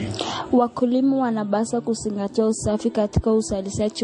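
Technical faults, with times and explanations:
Throughout, transcoding between lossy codecs: the speech sounds dull, with nothing above 10.6 kHz, and carries a mix of the artefacts of both codecs, two different textures heard at once. This is likely audio first encoded as MP3 and then re-encoded as Vorbis, at low rates that fit roughly 40 kbit/s each. The second encoder spent bits reproducing the first one's errors while adding its own, and the lower bandwidth limit carried through.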